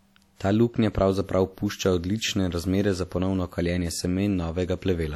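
Throughout the speech, plainly audible codec damage sounds ringing and washy, with a hiss that swells and fades with the signal. This is most likely WMA compression at a low rate, around 48 kbps. Long transform blocks smear quantisation noise over tens of milliseconds and zero out weak spectral lines. A steady noise floor would not track the signal, and nothing above 19.3 kHz survives.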